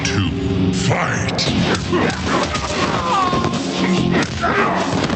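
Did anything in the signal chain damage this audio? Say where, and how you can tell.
Yes. The damage is gain pumping, at the input and dynamics stage, and it runs through the whole clip. The gain swings by around 15 dB, pulled down under each loud sound, so loud and soft parts sit squashed together. That points to input gain set far too high, likely with a fast limiter or compressor pulling it down. A noise gate would differ: it cuts the gaps to silence rather than letting the noise climb back. The call codec's top end stops near 8 kHz.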